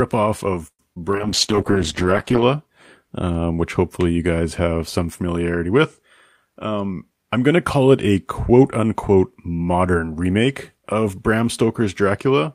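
From 0.67 to 0.82 s the speech stops: the last sound carries on as a fading buzz or hiss, then about 60 ms of silence, and resumes exactly where it left off. This is a call audio freeze, likely from packets stalling until the jitter buffer ran dry. Roughly 114 ms was inserted and nothing lost, unlike concealed loss.

At 0.95 to 0.99 s and again at 1.12 to 1.16 s there are brief smears. Each is short concealed packet loss: 40 ms of audio never arrived, and only about 10 ms was patched with extrapolated sound. Here the content is genuinely missing, and the delay shrinks by roughly 30 ms each time.

From 1.17 to 2.53 s a call bitrate drop takes the encoder from 40 to 9 kbps, bottoming out for about 1.24 s. The speech turns muffled and watery because high frequencies are cut and coding coarsens. Timing and pitch stay intact, unlike the buffer effects.

Overlapping it, from 1.55 to 2.37 s, a jitter buffer slow-down repeats pitch periods to rebuild reserve. 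The audio runs at 94% speed, adding 58 ms, with drawn-out sounds but unchanged pitch, so it is stretched rather than dulled.

From 6.55 to 7.38 s a jitter buffer speed-up trims pitch periods to cut excess delay. Speech runs at 112% and sounds hurried, with around 100 ms removed and pitch unchanged. It compresses the timing rather than dropping a single chunk like packet loss.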